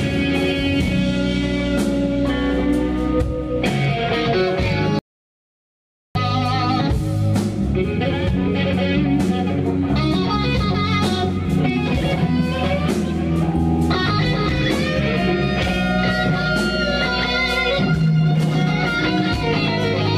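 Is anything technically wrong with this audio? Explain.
Yes. From 4.99 to 6.15 s there is an audio dropout to silence lasting about 1.16 s. The sound stops abruptly, likely because the input was lost while zeros kept being written. The waveform and spectrogram show a flat, silent gap with no room tone.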